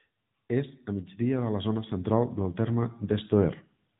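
From the start to the end, the speech carries the sound of an AMR narrowband mobile codec. Nothing passes above about 3.8 kHz. The top of the voice is cut away, leaving a boxed-in telephone tone. The codec does not send the waveform. It sends a model of the vocal tract and a few pulses per short frame. The damage is plainly audible: a buzzy, synthetic edge, from one of the higher modes at 10.2 kbps.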